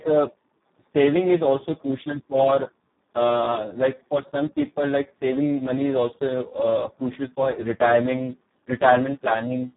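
From start to finish the speech carries heavy Speex codec damage: hoarse, buzzy and close to robotic, which fits a bitrate near 4 kbps starving the CELP excitation. Nothing sounds above 3.8 kHz, but unlike a plain low-pass filter, the speech itself is coarsened.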